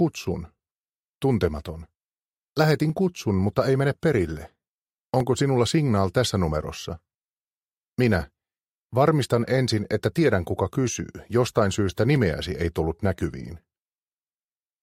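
Regular clicks occur from 0.58 s to 14.48 s, one every 2.32 s, about seven in all. This pattern points to clock drift buffer slips. Two clocks likely disagree by roughly 300 ppm. A buffer periodically drops or repeats a few dozen samples.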